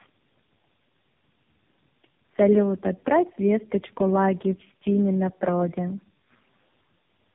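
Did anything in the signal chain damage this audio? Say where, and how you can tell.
Yes. The damage sits at the codec stage and runs through the whole clip: tandem speech coding, with the speech passing through what sounds like three low-rate coders in a row. It sounds rougher, more muffled and more warbly than a single pass would, which fits narrowband mobile codecs joined by telephone-grade links. Each coder rebuilds an already degraded signal, so errors compound. A spectrogram shows nothing above 3.6 kHz, with smeared, blotchy formant bands instead of clean harmonics.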